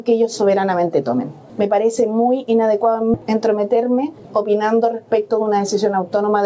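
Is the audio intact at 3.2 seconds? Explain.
No, there's a skip ahead around 3.14 to 3.16 s: about 0.7 s of audio got dropped while later audio was already queued, so playback jumps forward with no gap.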